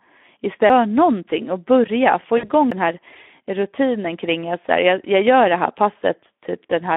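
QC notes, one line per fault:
Throughout: Speex codec. The speech is coded at 11 kbps and band-limited to roughly 250 Hz to 3.6 kHz, so it's thin and phone-like with nothing up top. At that rate the CELP coder can't model the excitation in detail, so the voice comes out noisy and hoarse. The damage is plainly audible the whole way through, not just on loud or busy passages.
0.69 s and 2.71 s: CD skip. Each is a quick tick with a dropout of only a few milliseconds, then the audio picks up from a different spot, as if the laser hopped to another turn of the spiral. The first lands right before "någonting och börja få", and the second comes just after that phrase. Because the mute is so short, you hear it mostly as a click plus a jarring jump in continuity.
2.37–2.50 s: VoIP packet loss concealed by the speech codec. Just after "någonting och börja få", about 60 ms of audio goes missing, which fits roughly three 20 ms frames. 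The decoder fills the gap by repeating its last pitch and filter state at a falling gain, so the sound is stretched out and fades. It stays weak and a bit warped for a short stretch after real audio returns, since each frame is built on the one before.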